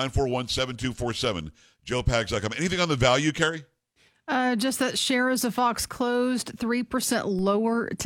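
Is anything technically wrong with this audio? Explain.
Yes, there's a DC step at 7.39 s: the waveform's zero line suddenly jumps by about -32 dBFS, then drifts back as a 5 Hz high-pass drains it, giving a low thump under the speech.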